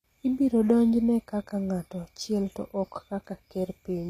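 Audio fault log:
Throughout: HE-AAC compression. The treble sounds synthetic, with s sounds gritty and metallic and nothing above 14.9 kHz. That's likely spectral band replication copying lower bands upward, and the damage is plain, which fits a low bitrate of around 24 kbps.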